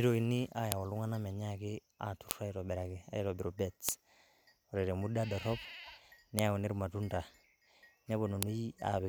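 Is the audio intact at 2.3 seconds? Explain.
No. At 2.31 s a sharp, loud click snaps through the speech, a file header played as audio. A new WAV piece begins there, and its header bytes were left in place, so those few dozen bytes of file metadata are reproduced as raw samples.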